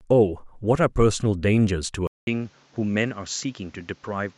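At 2.07 s the speech cuts out for about 200 ms and resumes duller and boxier through to the end. Nothing reaches above 7.6 kHz, the level sits a few decibels lower, and a new background noise appears well under the speech. This is likely an input switched to a poorer device. A simple filter or codec bandwidth drop would not also change the level, the tone and the noise floor together after a gap.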